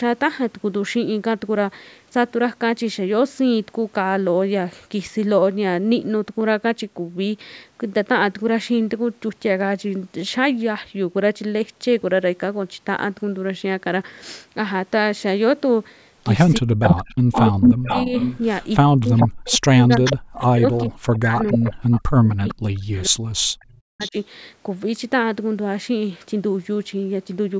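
From 16.59 to 18.14 s the speech drops sharply, by around 40 dB at its deepest, and cuts out in pieces for roughly a second in total. This is speech suppressed in double talk, likely caused by an echo canceller that could not tell the local talker from loudspeaker echo while both sides were active, so it pulled everything down. Overlapping this, from 16.82 to 18.38 s, an echo leak brings back a delayed copy of the speech about 0.42 s late and at roughly the same level as the direct sound. The far end was likely on a loudspeaker, and its canceller let the pickup through.

The same pattern repeats more heavily from 18.77 to 24.17 s, with gaps and dips adding up to about four seconds and again reaching around 40 dB down. Within that span, echo scraps return at 19.16 to 19.28 s, 19.9 to 20.44 s, 20.76 to 21.95 s, 22.48 to 22.55 s and 23.99 to 24.1 s. Their delay creeps from 0.43 to 0.46 s, and they sit between about 5 and 20 dB below the speech, so they sound like delayed repeats trailing the talker.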